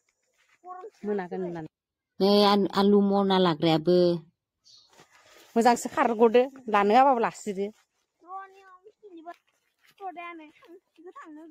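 Nothing stands out here, since there are no dropouts, glitches or other technical faults to point to anywhere in the recording.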